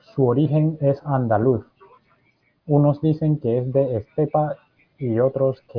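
No technical fault can be heard anywhere in this speech recording; the signal stays steady and intact throughout.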